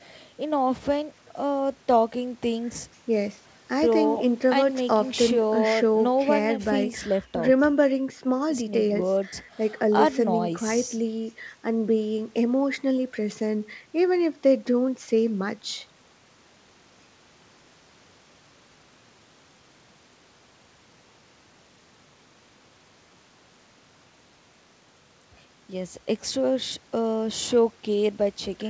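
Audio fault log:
Nothing stood out on listening to this speech, which comes over a G.722 call path at 64 kbps with nothing above 8 kHz.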